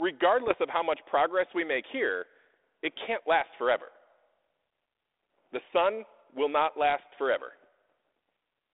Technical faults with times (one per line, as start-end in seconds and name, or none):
0.47-0.55 bit errors on an ADPCM link